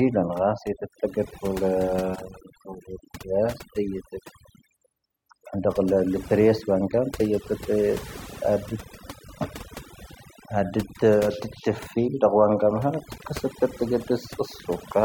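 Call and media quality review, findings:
Overdone noise removal, throughout. Background pulled down, twinkling specks between phrases. Noise suppressor set too aggressive: bands near its noise estimate cut hard or muted, taking quiet speech components down with them.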